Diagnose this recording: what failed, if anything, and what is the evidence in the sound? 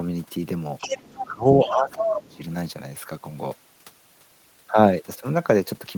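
Call processing likely let the far end's loudspeaker signal through an incompletely adapted echo canceller, so the other side's voice leaks through at 0.78–1.26 s, 1.48–1.67 s, 2.0–2.14 s and 2.32–2.36 s. It sits from just below the speech level to far beneath it.

The same canceller, likely unable to tell its own talker from the echo during double talk, pulled the near-end gain down. Speech is suppressed at 0.99–1.03 s, 1.25–1.46 s and 1.65–2.41 s, dipping by roughly 10 to 20 dB.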